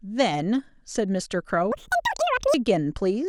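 From 1.72 to 2.54 s the speech suddenly races at twice its pace and jumps a full octave higher. This is audio read two samples at a time: each pair of samples is taken as one frame, doubling speed and folding high frequencies back.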